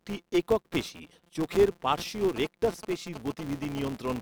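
From the start and through the whole clip there is a steady buzz at 172 Hz. This is a filter restarted on every block. It loses its state at each block boundary. Each block then opens with a small click. That rate fits a 256-sample block. The buzz rises and falls with the speech level.

At 1.34 s there is a brief smeared gap of about 10 ms. This is lost LE Audio frames, with one frame dropped. The decoder filled it by reusing the last spectrum with scrambled signs. The tone turns into a short noisy blur.

From 2.21 s to 4.12 s come GSM signalling bursts. A nearby 2G phone is signalling, and the audio circuit rectifies its radio bursts. They are heard as a galloping dit-dit-dit of short 217 Hz buzzes. They sit roughly 10 dB below the speech.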